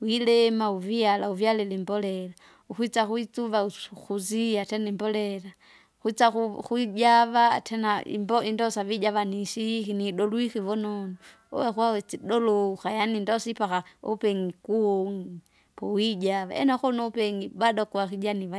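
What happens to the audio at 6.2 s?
Aliasing is present at 6.2 s, as it is throughout the clip. The speech was downsampled, consistent with a drop to about 22 kHz, without an anti-alias filter, so content above 11 kHz folds back as false tones roughly 30 dB below the signal, leaving sibilants gritty and metallic.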